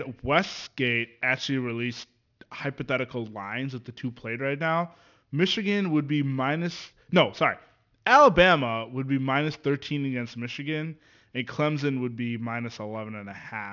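Aliasing runs through the whole speech clip: the audio was resampled down without a proper anti-alias filter, so content above about 6 kHz folds back as unrelated, gritty tones roughly 25 dB under the speech. The sibilants take on a metallic edge, and the spectrum runs hard to the 6 kHz band edge, which fits a drop to a 12 kHz sample rate.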